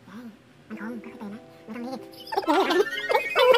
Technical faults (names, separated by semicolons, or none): audio read two samples at a time (double speed)